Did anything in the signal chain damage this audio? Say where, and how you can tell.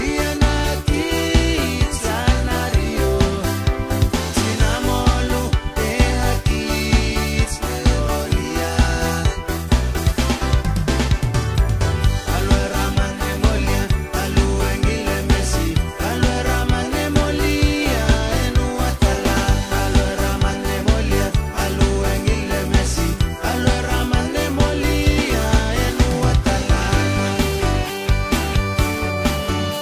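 No, nothing along the chain seems to have done any harm here, and there's nothing in this audio that I'd go hunting for.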